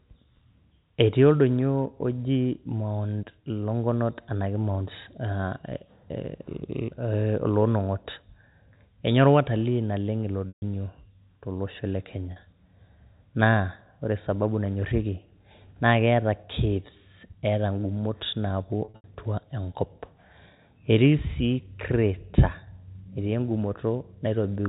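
At 10.49 s, 12.32 s just after "to losho le", and 18.84 to 19.04 s, packet loss with pitch repetition bridges gaps of 140, 40 and 160 ms by looping the last pitch period. Each gap becomes a held, buzzy tone that fades, not a hard cut to silence. The last loss is scattered, with a longest run of 80 ms.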